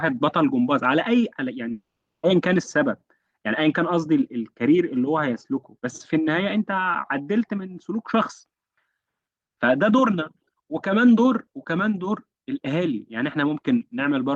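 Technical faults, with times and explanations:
1.71–2.25 s, long network dropout: audio likely stopped arriving over the network for 0.52 s, so the receiver stretched the last sound into a fading buzz, then about 0.34 s of silence followed, and the speech resumes with that stretch missing.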